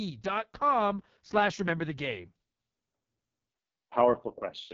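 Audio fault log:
throughout, AMR wideband (HD Voice) codec: rough, raspy speech with nothing above 7.5 kHz, as the pulse-driven vocal tract model runs short of bits, which fits the lowest 6.6 kbit/s rate.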